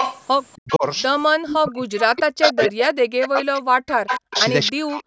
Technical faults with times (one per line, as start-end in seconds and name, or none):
0.00-0.77 echo leak
0.56-0.85 speech suppressed in double talk
1.43-5.06 speech suppressed in double talk
1.55-2.67 echo leak
3.21-4.69 echo leak